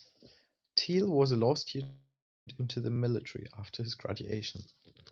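Right after "a law", from 1.83 to 2.49 s, the sound trails into a fading buzz and then 0.4 s of silence. That's likely a long network dropout, with 0.64 s lost before "into the military after".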